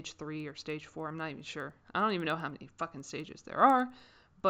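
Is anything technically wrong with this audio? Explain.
Yes. Throughout the clip, the resampler restarted on every block. Each 100 ms block went from 16 kHz to 48 kHz alone, without its neighbours at the edges. That leaves a 10 Hz ticking under the speech, seen as thin vertical spectrogram lines 0.1 s apart and small waveform steps at boundaries.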